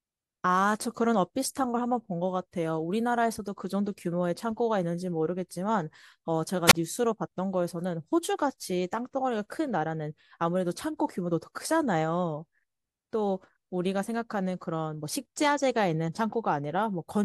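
At 6.68 to 6.73 s comes a wireless microphone squelch dropout. The FM signal fades, hiss swells briefly, and the receiver's squelch then mutes the output for 21 ms before the speech returns. The static rising just before the hole distinguishes it from a clean digital dropout.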